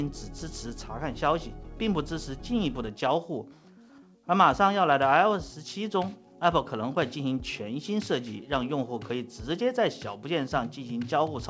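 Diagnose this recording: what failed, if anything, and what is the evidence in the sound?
Nothing failed at any stage of the chain. The sound passed through a call path and has nothing above 8 kHz, which fits a wideband codec such as G.722 running at 64 kbps.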